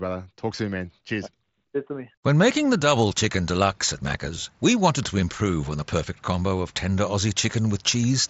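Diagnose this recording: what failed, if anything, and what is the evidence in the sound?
Nothing has actually failed here: the speech comes over a Bluetooth mSBC headset link at 61 kbps, so it tops out around 8 kHz and carries the light graininess on louder moments that this wideband headset codec normally leaves.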